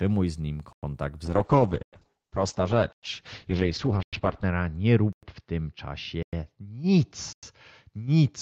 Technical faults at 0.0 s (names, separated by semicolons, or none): none